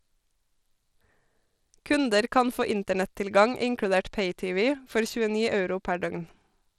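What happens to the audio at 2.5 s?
At 2.5 s the speech carries the same damage it has from start to finish, consistent with Bluetooth SBC compression, the likely cause. SBC splits the signal into a few wide sub-bands and hands out bits without a hearing model. At a low rate, around 96 kbps here, the weaker upper bands are starved and the rest coarsely quantised. The result is plainly audible: unstable, flickering treble with gritty noise and aliasing riding on the voice.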